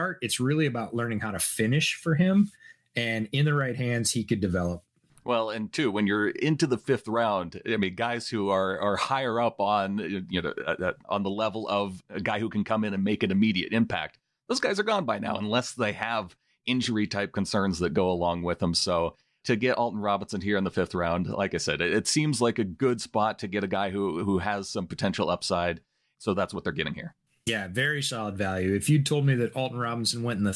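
No technical faults are audible.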